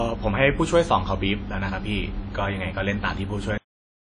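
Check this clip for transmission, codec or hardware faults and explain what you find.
Two faults are present in this speech clip: codec damage throughout and a truncated ending.

Throughout, the speech is band-limited at about 10.1 kHz and sounds washy, with ringing and signal-following hiss, most likely WMA compression at a low bitrate around 32 kbps.

At 3.58 s a cut-off end occurs: the final buffers were never written, so speech stops mid-sound and drops straight to digital silence for the remaining 0.44 s.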